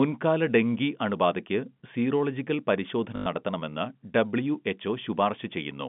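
A short robotic stutter breaks in from 3.16 to 3.26 s, just after "ഡെങ്കി അണുബാധയ്ക്ക് സീറോളജിക്കൽ പരിശോധന": a buzz near 50 Hz, carried over the telephone-band sound that tops out around 3.5 kHz. This is packet loss with the last packet repeated. About 100 ms of audio went missing, and the receiver kept replaying the final good chunk. Five packets were lost, which fits 20 ms packets.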